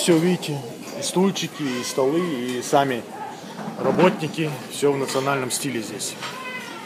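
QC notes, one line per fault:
3.95 s, repeated buffer: fresh audio failed to reach the output in time, so the device replayed its previous block once more, a repeat of about 1.45 ms, which fits a 64-sample buffer. The repeated slice joins hard against the sound on either side, and because the block is so short, the result is a single sharp click rather than an audible stutter, with roughly a millisecond and a half of audio lost.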